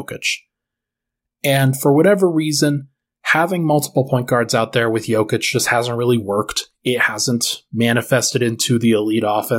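Nothing technical trips up this stretch of speech; there's simply no fault here to point to.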